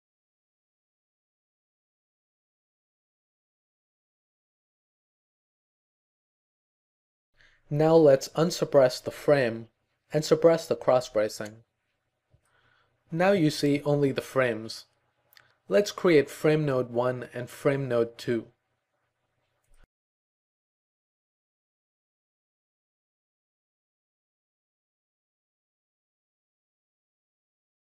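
No faults heard anywhere in the recording: no dropouts, level jumps or timing defects at any point.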